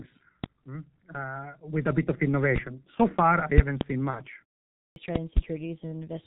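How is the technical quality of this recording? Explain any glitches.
The recording has poor technical quality, with heavy low-bitrate codec damage throughout and two short glitches near the end.

G.723.1 codec, throughout: The speech passed through a G.723.1 coder at a rate that fits its 6.3 kbit/s mode. Nothing above 4 kHz survives, and the voice model updates only every 30 ms or so. The speech sounds muffled and hoarse, consonants smear together, and the damage is heavy for the whole clip.

VoIP packet loss concealed by the speech codec, 4.10 to 4.23 s: A packet went missing, consistent with a single 30 ms frame. The decoder filled the gap by extrapolating from its last pitch and filter settings while lowering the gain. That shows up as a brief stretched sound that fades. Each frame depends on the one before, so the voice stays weak and distorted until about 4.23 s, well after the lost span.

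Clipped start after a pause, 4.90 to 4.96 s: After about 0.53 s of silence, the output path seems to have dropped into a sleep state and needed time to wake and lock again. The first 61 ms of the next sound were swallowed, so speech bursts in abruptly without its opening sounds.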